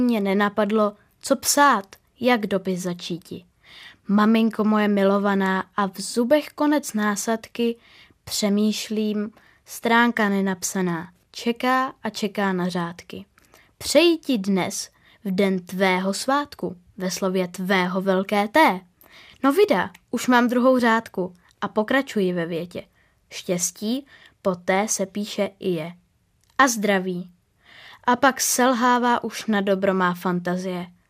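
Speech recording with no audible technical faults anywhere in the clip.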